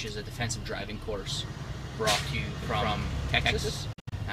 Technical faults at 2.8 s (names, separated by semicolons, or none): doubled audio track